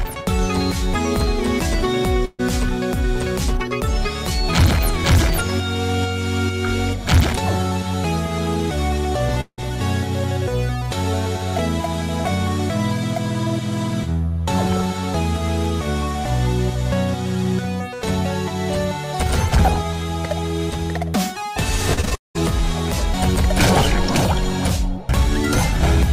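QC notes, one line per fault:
2.25 to 2.41 s, burst of packet loss. A short run of audio failed to arrive in time. The receiver covered the hole by stretching the last sound for about 132 ms and letting it fade. That is why a brief held buzz or hiss replaces the real signal. When playback resumes, about 140 ms of the original is missing, so the sound jumps ahead rather than picking up where it left off.
9.41 to 9.60 s, long network dropout. The sound freezes into a fading continuation for about 170 ms. It then drops to silence for about 70 ms before returning. The likely cause is a stretch where no audio reached the receiver at all, so concealment ran out and left nothing to play. About 180 ms of the original never comes back. The return lands later in the material, with an audible skip.
21.94 to 22.39 s, repeated packet loss (robotic sound). Six separate holes hit this half second in quick succession. 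The longest is about 195 ms. Each one is patched by repeating the last fragment before the next hole arrives. About 65 percent of the span ends up concealed rather than real, which gives the choppy, robotic texture. In total about 300 ms of the original is lost.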